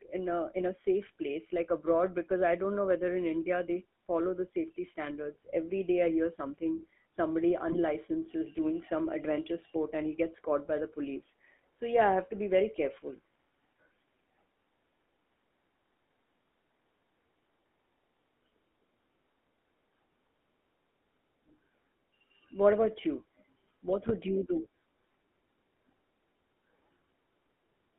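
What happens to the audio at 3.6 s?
At 3.6 s the speech carries the sound of the GSM full-rate codec, as it does for the whole clip. The codec models the vocal tract and drives it with a sparse train of regular pulses, so fine detail in the voice is lost. The result is a plainly audible buzzy, gravelly roughness. The band is narrowed to about 250 Hz to 3.4 kHz, giving a thin telephone tone. This fits a 13 kbps phone line.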